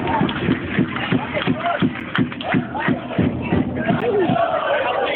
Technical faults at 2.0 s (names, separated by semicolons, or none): gap between stream segments